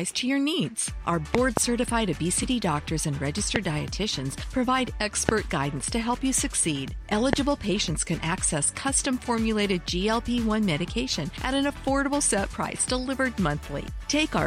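Loud pops mark the audio at 1.35–1.59 s (a double pop), 3.56–3.58 s, 5.29–5.31 s and 7.33–7.35 s. These sharp pulses peak roughly 20 dB above the sound, which carries on underneath, and likely come from voltage spikes from a switch, plug or static.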